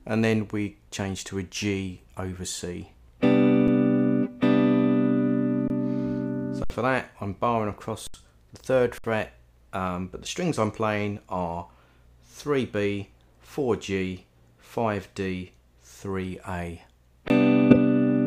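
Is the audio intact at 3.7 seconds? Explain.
No. At 3.68 s there is an underrun with held sample. The output buffer ran dry for about 5.3 ms. During that gap the converter kept repeating its last value, so the waveform sits flat. The sound simply stops, with almost no click at the start. About 5 ms of live audio was lost meanwhile. So when data returns, the waveform jumps to a new level.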